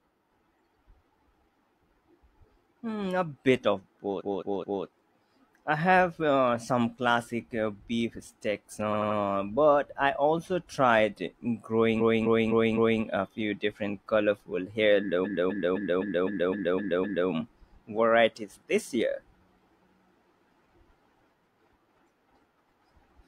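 A speech recording with repeated frames: blocks of compressed audio were duplicated, so the decoder plays the same slice several times in a row and the talker seems to stutter. After "a bit of", a 0.21 s block plays three extra times (4.16–4.80 s). After "classic uh beef steaks", a 0.09 s block plays three extra times (8.90–9.15 s) before "but I also tried". From 11.97 to 12.99 s, a 0.26 s block plays four extra times. After "a few different colorful", a 0.26 s block plays eight extra times (15.21–17.26 s). On a waveform these appear as identical, tiled segments. On a spectrogram they show as copied patches.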